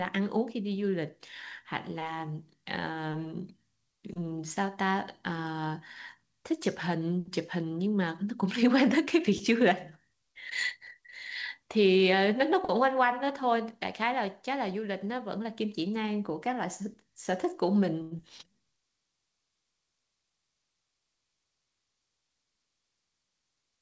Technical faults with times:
18.02-18.13 short stall from a late packet
18.17-18.20 skip ahead

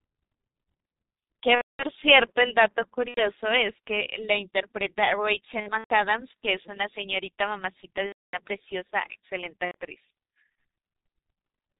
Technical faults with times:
0.00-11.79 G.723.1 codec
1.55-1.84 VoIP packet loss concealed by the speech codec
3.08-3.28 VoIP packet loss concealed by the speech codec
5.60-5.95 VoIP packet loss concealed by the speech codec
8.06-8.39 VoIP packet loss concealed by the speech codec
9.65-9.75 VoIP packet loss concealed by the speech codec

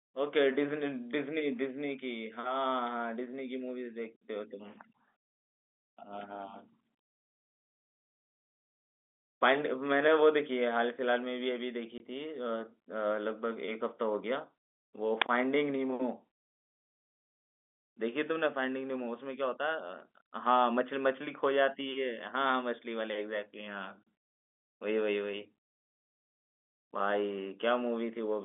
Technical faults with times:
11.98 packet loss filled with silence
15.22 uninitialised buffer

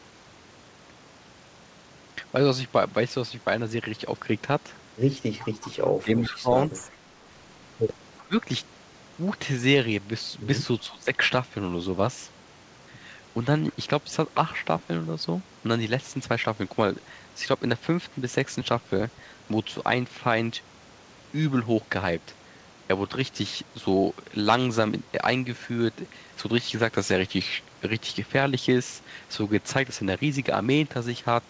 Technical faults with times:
5.44-5.70 echo leak
6.02-6.90 speech suppressed in double talk
6.92-6.96 echo leak
8.20-8.36 speech suppressed in double talk
10.89-11.09 speech suppressed in double talk

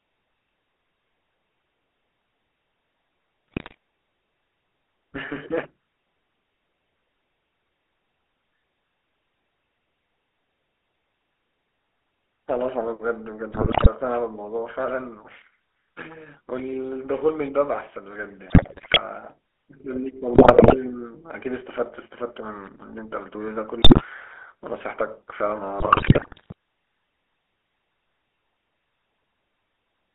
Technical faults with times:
0.00-30.14 GSM full-rate codec
3.48-3.77 GSM bit errors
13.50-13.88 GSM bit errors
18.46-19.02 GSM bit errors
20.34-20.75 GSM bit errors
23.82-24.03 GSM bit errors
25.80-26.54 GSM bit errors

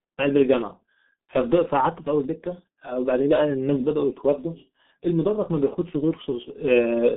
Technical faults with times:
0.00-7.16 G.723.1 codec

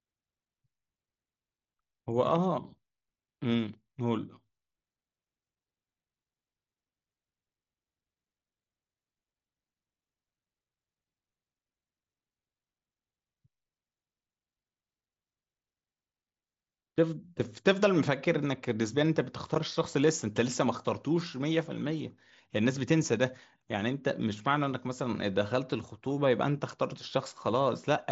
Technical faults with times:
none

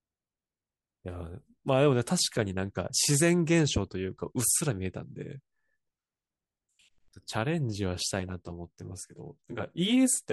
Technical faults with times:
8.20-10.33 channel delay (comb filtering)

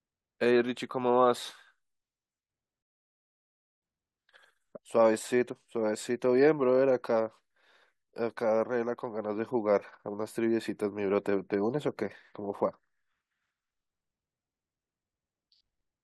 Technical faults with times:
2.82-3.82 rebuffering stall

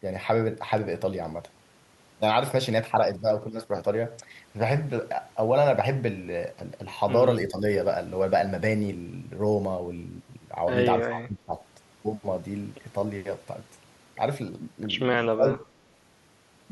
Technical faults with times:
2.78-5.13 periodic clock jitter
7.48-7.63 speech suppressed in double talk
10.99-11.55 speech suppressed in double talk
15.31-15.72 speech suppressed in double talk
15.61-15.65 echo leak

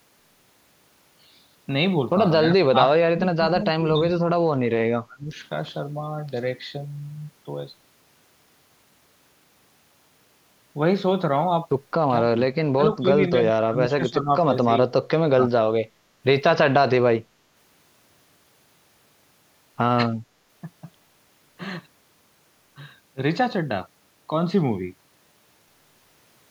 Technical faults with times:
2.46-4.52 speech suppressed in double talk
5.05-5.37 speech suppressed in double talk
12.28-12.38 speech suppressed in double talk
12.75-14.89 speech suppressed in double talk
15.36-15.53 speech suppressed in double talk

